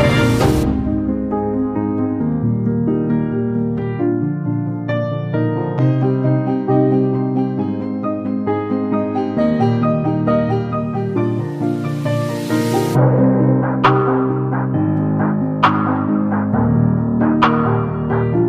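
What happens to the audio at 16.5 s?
Nothing goes wrong at 16.5 s; the audio plays through that moment intact, with no dropout, glitch or distortion.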